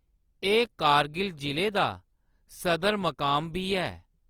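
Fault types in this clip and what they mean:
Opus compression: The speech sounds plainly rough and grainy, with detail turning to noisy fizz, yet the top end stays open to 20.2 kHz. That's likely Opus in its music mode, short of bits at a rate that fits 24 kbps and filling bands with noise.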